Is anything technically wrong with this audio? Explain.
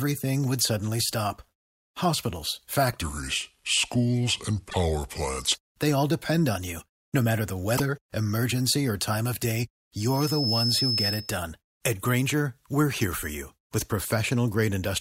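Yes, the speech has three kinds of fault.

Section at the wrong speed, from 3.01 to 5.54 s. This stretch plays at 0.743 times its recorded speed, likely because it was fitted to the wrong clock during editing or playback. Because speed and pitch are tied together, the speech drags and its pitch drops by about five semitones, so it sounds deep and sluggish. It snaps back to normal speed and pitch at 5.54 s.

Broken MP3 bit reservoir, from 4.69 to 4.75 s and from 7.77 to 7.80 s. MP3 frames store part of their data in earlier frames. When frames go missing, the frame after the gap looks back and decodes bytes that belong to a different frame. That is the likely cause here, and the gaps fit a frame length of 24 ms. Each event sounds like a brief skip forward, with a tiny garbled burst or dropout lasting only a couple of frames. The first one falls inside the slowed section.

Loudspeaker feedback squeal, from 9.98 to 11.46 s. 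The microphone picks up the loudspeaker it feeds, and at 5.2 kHz the loop gain goes above one, so that frequency keeps amplifying itself. A thin, high tone rises over roughly half a second into a piercing squeal about as loud as the speech. It ends at 11.46 s.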